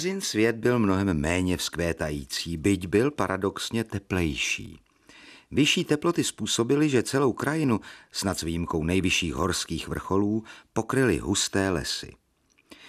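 Speech with audio missing between chunks: tiny skips at 1.67 s (right after "svět byl mnohem méně"), 4.66 and 7.64 s, each losing about 15 ms, likely from 3-second chunk boundaries.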